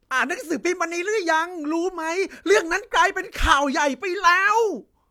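No technical faults are audible anywhere in the speech.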